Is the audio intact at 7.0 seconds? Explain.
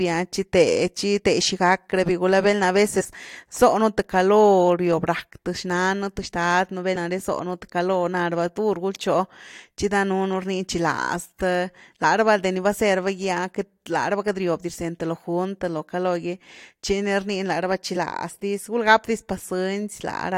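No. At 6.95 s, just before that point, compressed frames are skipped. Whole frames are missing or rejected by the decoder, so the speech jumps ahead by about 50 ms, leaving an abrupt join in the audio.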